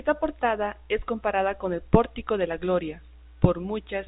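From 0 to 2.0 s, a treble-cut filter meant to undo pre-emphasis was applied where none had been added, or applied twice. This is de-emphasis applied wrongly. The response tilts smoothly downward toward the top, reaching about 11 dB of loss at 10 kHz relative to 1 kHz. Within the narrow G.711 telephone band, which stops at 3.8 kHz, the speech sounds dull and muffled for those two seconds, with its upper consonant detail softened.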